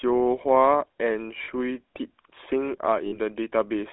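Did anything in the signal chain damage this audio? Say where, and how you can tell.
Yes, at the codec stage. The whole clip has the GSM full-rate codec's buzzy, gravelly roughness, which fits 13 kbit/s full rate. The sound is confined to about 250 Hz to 3.5 kHz. A spectrogram shows an empty region above 3.5 kHz and smeared, grainy harmonics.

The network or radio link also caused lost GSM frames at 1.44–1.49 s (about 40 ms, consistent with two 20 ms frames) and 3.06–3.18 s (about 60 ms, like three frames). Each sounds like a brief metallic ring where the decoder repeats the last good frame. A waveform shows a short repeating pattern.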